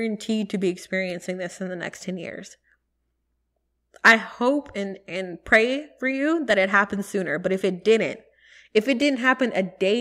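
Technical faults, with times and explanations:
1.10, 4.08, 6.51, 7.54 and 9.02 s: dropped samples. Five isolated sharp clicks, the first between "to be" and "this in the next", the second just before "hope and and pray", the last just after "it didn't if it". Each is most likely a tiny fraction of a millisecond of missing audio. The waveform jumps abruptly to a later value, which produces the click. Unlike a dropout, no sound goes missing and there is no audible gap or silence, just a single click with nothing lost around it.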